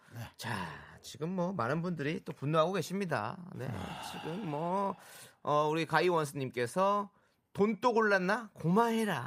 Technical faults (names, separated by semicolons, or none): none